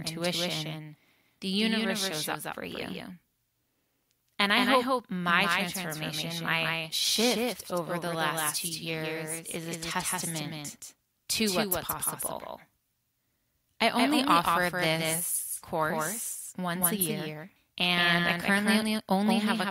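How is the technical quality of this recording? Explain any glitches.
The recording has one fault, heard throughout: a doubled audio track. Every stretch of speech is followed about a fifth of a second later by a flat, full-band copy around 5 dB quieter, with no room colour. The likely cause is a second capture through a slower path.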